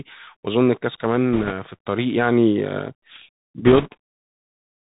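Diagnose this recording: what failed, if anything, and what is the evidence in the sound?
Bluetooth CVSD headset codec, throughout the speech (codec stage). Nothing above 4 kHz survives. A granular hiss sits under everything, s sounds turn scratchy, and loud bright passages distort when the adaptive one-bit step can't keep up. This fits a 64 kbps CVSD stream.

Bit errors on a Bluetooth voice link, 1.33–1.52 s and 3.66–3.88 s (radio link). Both bursts add a rushing crackle with no sharp clicks. Each flipped bit nudges the delta-coded waveform by one step, whose size grows with the speech level, and the error decays, so a few percent error rate yields noise, slightly heavier in the second burst.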